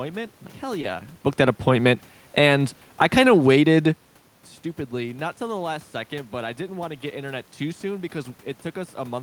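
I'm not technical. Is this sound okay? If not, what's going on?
No. At 0.81 to 0.85 s there is a short concealed packet loss. A sliver of the call arrived too late, so the receiver covered the gap by stretching the sound just before it. Unlike a plain click or dropout, it sounds like a tiny smear.

From 1.35 to 3.88 s, just before "stupidly not till the", comes automatic gain falling. The call's volume control judged the input too loud or too noisy and eased it down. The room's background noise sinks along with the voice, which sets it apart from the talker's own shifts in position around 1 and 4 s.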